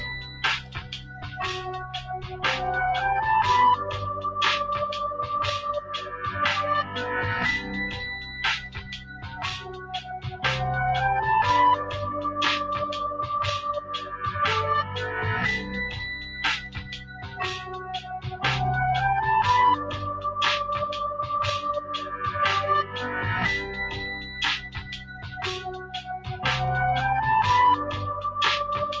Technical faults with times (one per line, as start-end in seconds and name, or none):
0.00-29.00 noise suppressor applied to music or sounds
0.00-2.44 sound cut by the noise suppressor
8.18-10.44 sound cut by the noise suppressor
16.18-18.42 sound cut by the noise suppressor
24.18-26.43 sound cut by the noise suppressor